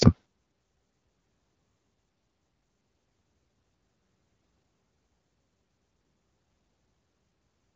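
Nothing here calls for a fault note. The speech runs through an AMR wideband (HD Voice) path whose sound fits the 12.65 kbit/s rate, where that codec stays clear and leaves only a light coding texture.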